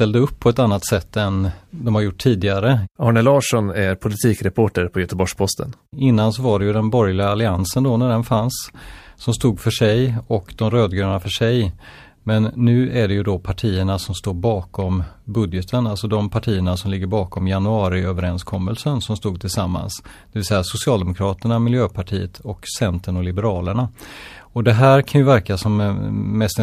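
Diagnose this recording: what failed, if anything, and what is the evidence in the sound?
Nothing failed: the speech recording shows no audible fault at any stage of the chain, so there is no evidence to cite and no mechanism to diagnose.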